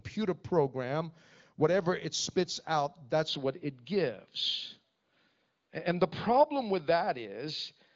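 A speech recording whose sound turns duller and boxier at 3.28 s and stays that way to the end, with no gap and no change in level. The top of the band drops from about 7.5 kHz to 5 kHz, and a faint new noise floor appears well below the speech. The likely cause is an input switched to a poorer device partway through.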